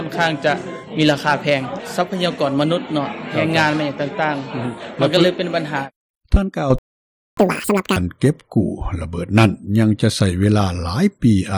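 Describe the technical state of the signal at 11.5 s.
At 11.5 s the signal is intact, with no dropout, clipping, glitch or other fault audible at that moment.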